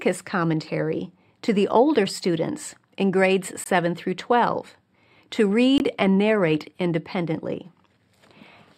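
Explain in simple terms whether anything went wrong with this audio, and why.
Two brief dropouts interrupt the speech, each a short hole where the sound cuts out completely for 20 milliseconds: one from 3.64 to 3.66 s, right after "older students in grades", and another from 5.78 to 5.80 s, just before "and narrate independently". Each is a block of digital silence, a stretch of audio replaced by silence. The sound stops and restarts abruptly with no fade.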